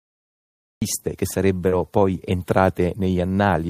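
It's a speech clip, and the first thing you notice is a cut-off start: there's digital silence from 0 s until about 0.82 s, then the audio jumps in already mid-sound, with no natural attack or fade-in. That's what you get when a recording or stream begins late and catches the sound partway through rather than at its onset. Around 1.69 to 1.74 s there's a short concealed packet loss. About 20 ms of the call didn't reach the decoder in time, so the receiver covered roughly 22 ms by extending the preceding sound, carrying its pitch forward if voiced or substituting shaped noise if not, before blending back into real audio. You hear it as a brief smear or wobble right there. Overlapping that, from about 1.72 to 1.74 s, one lost packet was rebuilt from error correction. The packet following it carried a low-bitrate copy, Opus in-band forward error correction, and the decoder played that copy instead of leaving a hole. 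So there's no gap across those 20 ms, but the rebuilt frame comes out rougher and noisier than the surrounding audio.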